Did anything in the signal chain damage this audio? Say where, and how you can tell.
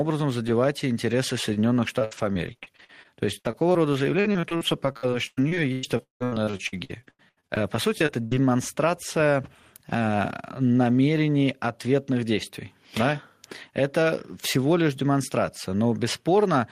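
Yes: after "задевать интересы", 1.47 to 8.47 s sounds choppy and robotic. This is repeated packet loss on the network, with gaps up to 177 ms filled by repeating earlier sound.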